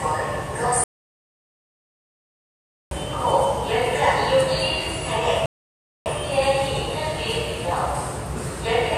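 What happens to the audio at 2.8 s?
At 2.8 s there is dead silence: the sound cut out abruptly at 0.84 s and stays completely silent, with no room tone at all, until it resumes at 2.91 s. This is an audio dropout to silence, about 2.07 s of the sound lost. The likely cause is an input that disconnected or was muted while the recorder kept writing silence.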